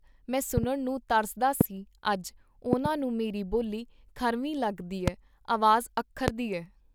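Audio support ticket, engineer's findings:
Loud pop, speech continuing underneath: 0.57–0.66 s (double), 1.61–1.63 s, 2.73–2.88 s (double), 5.08–5.10 s, 6.28–6.30 s, roughly 15–25 dB over signal. Likely connector or switch transients. Not a dropout.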